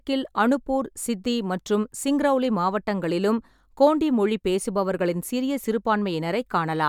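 No technical faults are audible.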